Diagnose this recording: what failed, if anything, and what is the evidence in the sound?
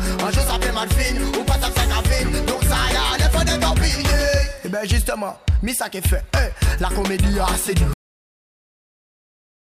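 A cut-off end at the storage or buffer stage: at 7.93 s the audio stops mid-sound and stays silent to the end. The final buffers were never written, so there is no decay or tail, and unlike a dropout, nothing resumes.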